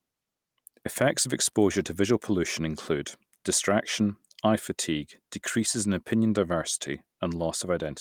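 Nothing stood out as a technical problem on listening to this speech recording.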